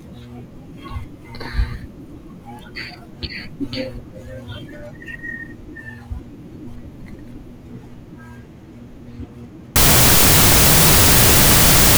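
Wrong sample width from 9.76 s to the end of this speech clip: the audio turns into loud noise with the speech buried inside, running at half speed and an octave low. That points to 32-bit float data read as 16-bit integers, splitting each sample into two mismatched values.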